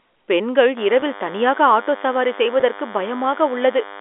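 At 0.77 s a DECT cordless phone buzz starts and runs to the end. A nearby DECT handset or base sends a radio burst every 10 ms, and the audio circuit rectifies it. The result is a thin, steady 100 Hz buzz, rich in harmonics, roughly 15 dB below the speech.

From 1.0 to 1.02 s, and again from 2.6 to 2.62 s, there is packet loss with pitch repetition. About 20 ms of audio went missing each time, which fits one lost packet. The receiver repeated the last pitch period to fill each gap, so each sounds like a brief, buzzy held sound.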